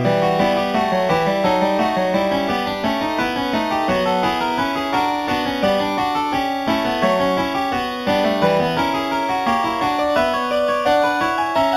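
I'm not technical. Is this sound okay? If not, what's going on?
No, not quite. The whole clip has imaging from linear upsampling. At some point the audio was stretched to a higher quality setting by simply joining the dots between samples, which fits a low 8 kHz original. That leaves the top end dull, with no real detail above 4 kHz. In the 4 to 8 kHz range, quieter mirror copies of the sound sit where that detail should be, so sharp, bright moments get a thin, metallic shimmer.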